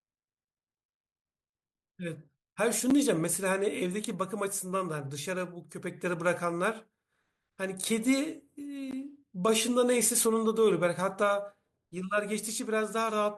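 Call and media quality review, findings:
Gap between stream segments: segment timestamps misaligned at boundaries about 6 s apart, player pads with silence. Hard-edged dropouts in the speech at 2.90 s (about 8 ms) and 8.91 s (about 17 ms). Timeline stretched, no audio lost.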